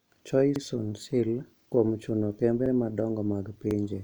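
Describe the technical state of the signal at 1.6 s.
At 1.61 to 1.66 s the speech has an overlapping chunks fault. A new chunk, about 1.0 s long, begins before the previous one has finished, so 50 ms of audio at the join is played a second time. The sound is a brief stutter where a fragment repeats. Unlike a dropout, nothing goes missing and no silent gap appears; the fault adds a doubled slice of the same sound instead of removing one.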